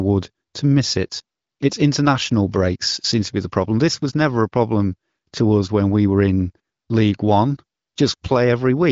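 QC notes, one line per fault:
No faults to note.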